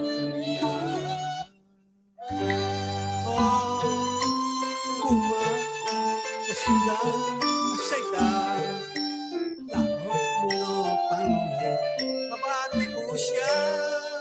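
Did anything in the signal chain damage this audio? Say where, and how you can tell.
Yes. In the call processing stage, a noise suppressor designed for speech stayed active on this non-speech sound. It treats sustained tones and decaying tails as noise, so the level pumps by roughly 5 dB throughout, with attacks passing while held portions sink.

The same noise suppressor cuts some stretches harder, mistaking steady material for noise. The sound drops by about 21 dB between 1.44 and 2.2 s, by about 9 dB between 9.56 and 9.78 s, and by about 6 dB between 12.86 and 13.01 s.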